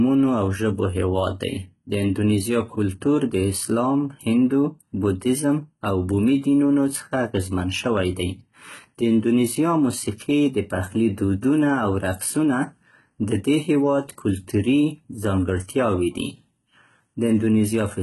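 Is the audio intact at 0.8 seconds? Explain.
No. At 0.8 seconds, as across the whole speech clip, the treble sounds synthetic: s sounds come out gritty and lispy, and nothing is present above 11.8 kHz. This is likely heavy HE-AAC compression, consistent with a bitrate around 16 kbps, where spectral band replication copies lower bands upward instead of coding the real highs.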